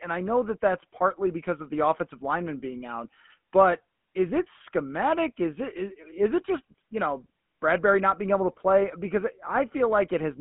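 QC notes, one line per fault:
Throughout, GSM full-rate codec: the speech has the buzzy, gravelly roughness of the original GSM coder, which models the vocal tract and excites it with a coarse pulse train carrying only a third of the excitation samples. The damage is plainly audible. Nothing is heard above 3.8 kHz, and the band sits roughly between 150 Hz and 3.4 kHz, which points to a phone-line path, with the coder running at 13 kbps.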